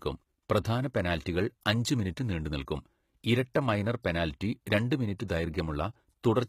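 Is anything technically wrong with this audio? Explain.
Yes. Throughout the clip the speech carries plainly audible codec damage, most likely from HE-AAC compression at a low bitrate, around 20 kbps. Only the lower spectrum is coded directly. The treble is rebuilt by copying lower bands upward and fitting them to a coarse envelope. The regenerated top end fails to line up harmonically with the real content below the crossover, so sibilants and other high-frequency detail come out gritty, metallic or lispy.

Pre-echo appears at four points: 0.63 s, 3.54 s, 5.18 s and 5.28 s. Each spans about 12 to 18 ms. In a transform codec, quantisation noise is spread across the whole block. When a sharp onset lands late in a block, noise scaled to the loud part leaks into the quiet stretch just before it. Each of these attacks is therefore preceded by a brief burst of hiss and sounds softened or smeared.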